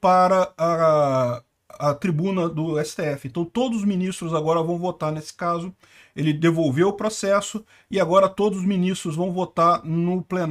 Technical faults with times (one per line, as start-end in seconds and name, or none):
none